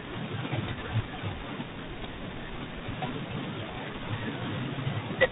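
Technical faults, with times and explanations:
Throughout: tandem speech coding. The speech passed through about three speech codecs in a row, with plain telephone-grade links between them, so each coder had to re-encode the previous coder's errors rather than clean speech. Nothing is left above 3.8 kHz, and the roughness and noise sound like repeated low-rate ADPCM, with a delta-modulation stage likely in the chain. Unlike a single coder at low bitrate, the grit and noise stack up in layers instead of sounding like one consistent coding texture.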